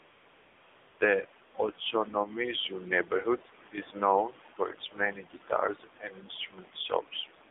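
Speech carried through an AMR-NB narrowband mobile codec for the whole clip. The line band runs from about 200 Hz to 3.6 kHz, so a spectrogram shows nothing above 3.6 kHz. The thin, buzzy, synthetic voicing fits a low AMR mode near 7.4 kbps, where the vocal-tract model has few pulses to work with. AMR comfort noise fills 0 to 1.0 s and 1.44 to 1.54 s, where no speech frames were sent. The receiver substituted steady, smooth synthetic noise, which appears on the waveform as flat, even low-level bands that switch abruptly in and out rather than natural background.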